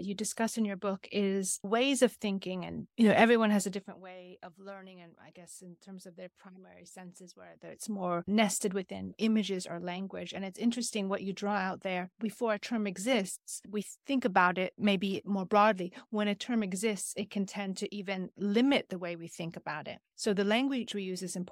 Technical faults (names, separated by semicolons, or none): corrupt frame decoded